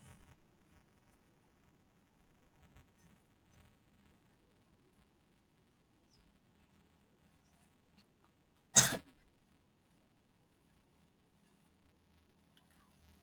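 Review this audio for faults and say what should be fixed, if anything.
Buffer tearing runs through the whole speech clip as a steady robotic buzz at 345 Hz, which fits a 128-sample buffer. A small slice of each period repeats audio from a few milliseconds earlier, with hard joins. Unlike an underrun's scattered dropouts, this buzz is continuous and disappears in silence. Keep the writer safely ahead of the hardware read pointer, with enough buffering margin that the two never cross.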